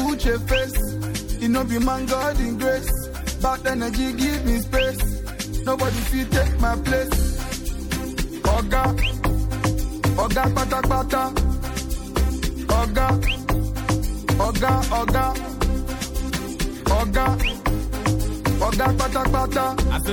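Plainly audible MP3 compression runs through the whole recording. Weak detail flickers between frames, giving a watery, swirly texture with smeared attacks. The damage level fits an encode of about 64 kbps, with the encoder likely starving its upper bands. At 16.29 s, compressed frames are skipped: roughly 70 ms of audio, about three 26.1 ms frames, never plays. The sound jumps forward, and because adjacent frames overlap, the splice is a short smeared blip rather than a sharp click.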